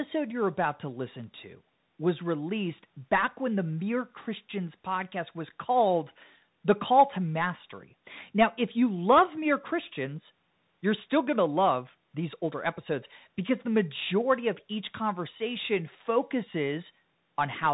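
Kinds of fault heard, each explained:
Bluetooth CVSD headset codec: one-bit delta coding plainly roughens the speech, with scratchy sibilants, granular hiss and nothing above 3.8 kHz, which fits a 64 kbps headset link.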